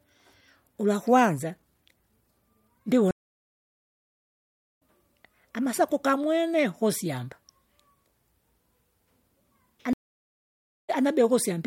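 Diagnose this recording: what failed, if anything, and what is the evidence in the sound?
Stream reconnect, at the network stage, at 3.11 to 4.82 s and again at 9.93 to 10.90 s. The speech drops to silence for 1.66 s, then 0.93 s, and resumes each time at a later point in the stream: about two seconds further on after the first gap, and a fraction of a second after the second. The connection broke, the player waited, reconnected, and started a fresh decoder at the live position, so the speech in between never arrived.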